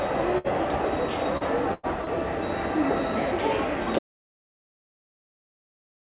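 Everyday sound heard through a call path, band-limited with nothing above 4 kHz, which fits G.711 mu-law at 64 kbps. Bursts of packet loss at 0.38–0.47 s and 1.74–1.86 s: the receiver stretched the last sound into a fading tail for about 63 and 98 ms, and about 60 and 90 ms of audio are skipped. Short concealed packet loss at 1.37–1.44 s and 2.04–2.09 s: roughly 30 ms goes missing each time, patched by extrapolation, leaving a brief smear or wobble. Audio dropout to silence from 3.99 s to the end: silence with no room tone, likely from a lost input or link.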